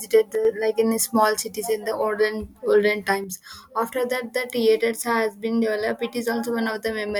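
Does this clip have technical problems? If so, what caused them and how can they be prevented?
Yes. The speech level drops abruptly by about 6 dB from 0.35 to 0.45 s, just before "like in small cities", and from 3.24 s to the end. This is likely one channel dropping out before the mono sum. Unlike a fade, it is an instant step. Securing stereo connectors and cables prevents it.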